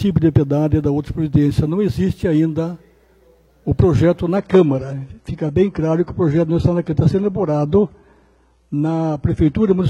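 At 4.36 s the sound turns abruptly duller and more synthetic-sounding, with nothing above 11.8 kHz, and stays that way to the end with no gap. This is an adaptive stream switching to a lower bitrate, which fits a slowed connection forcing a lighter encoding.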